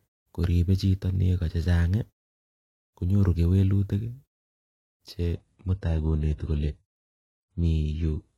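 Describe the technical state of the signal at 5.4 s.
At 5.4 s the adaptive stream has just dropped to a lower bitrate, a switch that begins at 5.35 s and lasts to the end of the clip at about 8.4 s. The player swapped to a much leaner encoding without any gap, and the sound changes abruptly: nothing remains above 11.4 kHz, and the upper speech band turns thin. That character fits a move from AAC-LC at 96 kbit/s to a low-rate HE-AAC stream at around 12 kbit/s.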